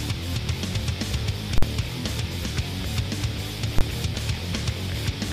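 Invalid numbers at full scale occur at 1.58 to 1.63 s and at 3.79 to 3.81 s. A calculation produced infinite or invalid values that were pinned to one extreme, flattening the output for about 46 ms and 23 ms, which fits 2048- and 1024-sample blocks. Each is heard as a very loud pop with no sound inside it.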